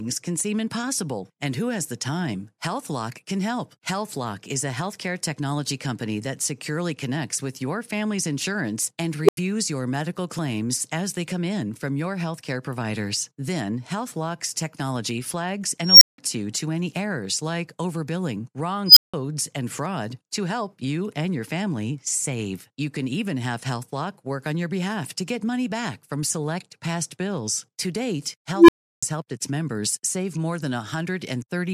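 A speech clip hit by an unstable filter four times: at 9.24 s a low tone of around 400 Hz swells in about 42 ms and drops to 85 ms of silence. At 15.80 s and 18.86 s, roughly 5 kHz squeals build over 213 and 106 ms, each followed by 171 ms of silence. At 28.54 s, a low tone near 300 Hz builds over 141 ms before 341 ms of silence. Each time a recursive filter with bad coefficients feeds back on itself, clips, then overflows and mutes until it resets.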